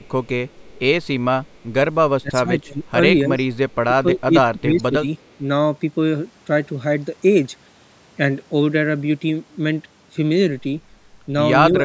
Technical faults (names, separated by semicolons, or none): echo leak; speech suppressed in double talk